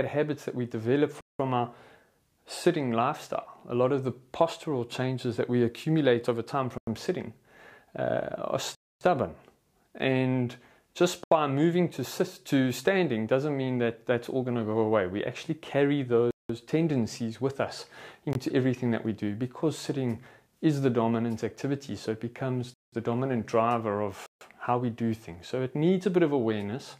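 Eight blocks of digital silence land at 1.21, 6.78, 8.75, 11.24, 16.31, 18.33, 22.74 and 24.26 s, running 21 to 260 ms. The repeated 186 ms gaps fit an unfilled 8192-sample buffer. Each cuts hard to silence and back.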